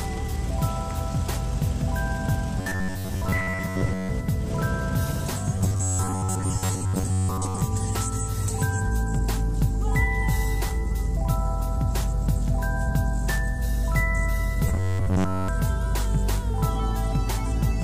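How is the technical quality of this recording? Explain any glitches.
The technical quality suffers from three bursts of robotic sound from repeated short buffers, at 2.59 to 4.10 s, 5.59 to 7.61 s and 14.68 to 15.48 s. New audio likely arrived too slowly, so playback looped a tiny stretch, consistent with a buffer of about 10.7 ms, and skipped most of the real material. That loop imposes a rigid, metallic 93.8 Hz buzz on the sound.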